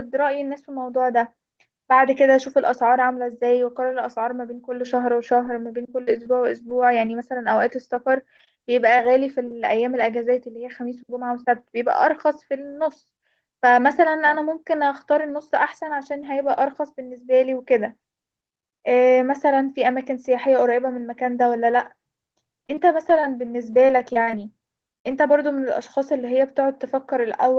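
From 5.45 to 10.01 s there are scattered short gaps. Around ten packets arrive lost or late, spread across the stretch. Together they leave 180 ms missing. The receiver covers each hole by stretching the last sound, which fills 400 ms in all. The longest gap runs about 40 ms. Only a small share of the span is patched. The speech stays clear but picks up brief ticks and small smeared hiccups.

Between 14.85 and 16.43 s come nine lost packets rebuilt from error correction. Each covers 20 ms, and they fall every 100 to 380 ms. No gap is heard. Each missing packet was decoded from a low-bitrate copy carried in the next packet. Those frames sound rougher and noisier than their neighbours, like brief grainy flecks. The call audio tops out near 8 kHz, which fits an Opus call link, so no extra treble dip stands out.

From 21.73 to 25.13 s the scattered short gaps return, and they are denser. About ten losses remove 240 ms. 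Concealment fills 360 ms by extending the preceding sound. The longest gap reaches roughly 50 ms, and a larger share of the span is patched than before. The ticks and smears come more often here.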